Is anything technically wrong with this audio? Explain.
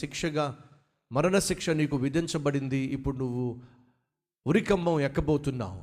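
No technical faults are audible.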